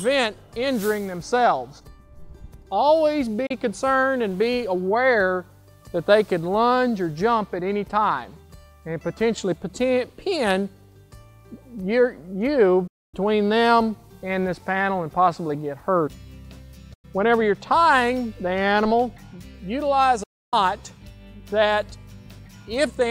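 Digital broadcast dropouts occur at 3.46, 12.87, 16.94 and 20.23 s. Each quickly fades to silence, muting for 32, 256, 96 and 288 ms while the receiver lost frames.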